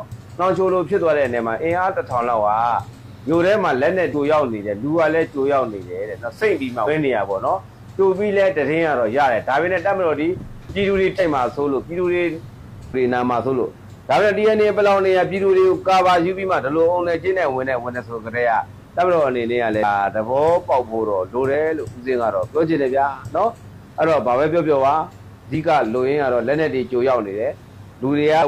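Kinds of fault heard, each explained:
Damaged data in a compressed stream: Some bytes in the coded file are wrong. The decoder misreads those frames and has to find its place again. Here that gives five short blips, each about 50 ms, at 4.09, 6.83, 11.15, 19.79 and 28.38 s.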